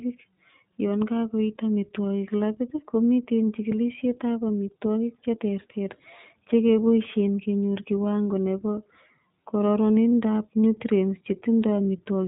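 The speech has been carried through the iLBC codec for its whole length. The narrow band points to iLBC at a rate that fits 15.2 kbps with 20 ms frames. Each frame's excitation is coded on its own, and nothing above 4 kHz survives, so the speech sounds muffled and boxy. The coding damage is plainly audible, with a slightly rough, synthetic edge.

At 8.25 s and again at 10.11 s, lost iLBC frames break the stream, each one a single 20 ms frame. The decoder fills each hole by repeating the last pitch cycle blended with noise. Each gap comes out as a brief held, faintly buzzy vowel sound. Because iLBC frames don't depend on their predecessors, the speech snaps back cleanly right after each glitch.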